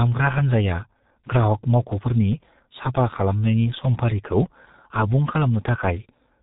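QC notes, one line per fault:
throughout: G.723.1 codec, heavy low-rate coding that fits about 6.3 kbit/s cuts everything above 3.8 kHz, leaving the speech muffled and hoarse with smeared consonants.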